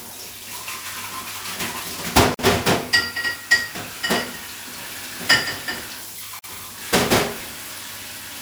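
At 2.34 s and again at 6.39 s, continuous sound falls silent for about 47 ms and then 49 ms. Each is a gap at a join of encoded pieces: separately encoded segments, spaced 4.0 s apart, were butted together with each encoder's start-up delay and last-frame padding left in. Unlike a packet dropout, nothing is skipped: the sound resumes exactly where it stopped, the edges are smeared rather than clicking, and the gaps recur at a fixed interval.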